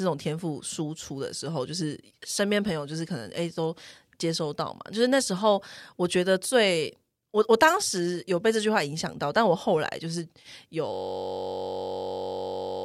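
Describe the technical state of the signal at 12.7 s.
At 12.7 s the signal is stuck in a system hang loop, running from 10.94 s to the end. The hardware keeps replaying one frozen 21.33 ms buffer, consistent with 1024 samples, about 90 times. It sounds like a steady 46.9 Hz buzz. The waveform shows identical repeating blocks, and the spectrogram shows a rigid harmonic comb spaced 46.9 Hz apart.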